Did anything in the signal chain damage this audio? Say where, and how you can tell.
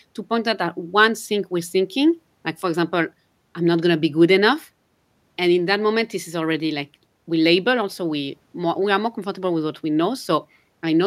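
No, no signal-chain damage audible.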